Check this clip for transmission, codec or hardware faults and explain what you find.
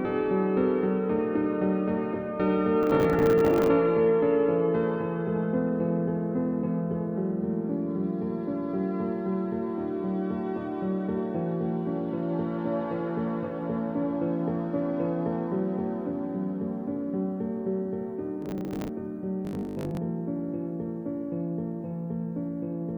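Two kinds of fault are audible.

Processor overload crackle occurs from 2.83 to 3.68 s and again from 18.42 to 18.89 s. The processor keeps missing deadlines for buffers of around 10 ms, dozens in a row, and each miss replays stale audio. The result is a gritty tearing, which shows as vertical spectrogram streaks and sharp waveform discontinuities.

Robotic sound from repeated short buffers runs from 19.45 to 19.97 s as a rigid, metallic buzz at 50 Hz. The likely cause is a 20 ms fragment being looped across most of this span. On a spectrogram this appears as evenly spaced harmonic lines at 50 Hz intervals, and the waveform shows an identical repeating period.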